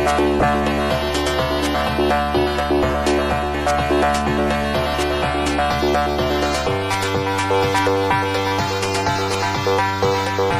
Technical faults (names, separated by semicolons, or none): corrupt frame decoded